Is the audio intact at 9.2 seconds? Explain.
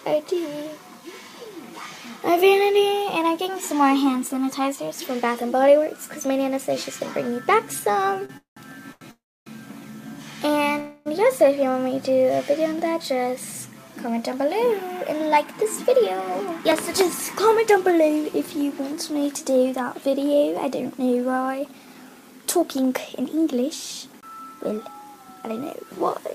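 No. A call audio freeze spans 9.11 to 9.48 s. Delayed packets likely drained the jitter buffer, so a short fading buzz and 280 ms of silence were inserted, with nothing lost.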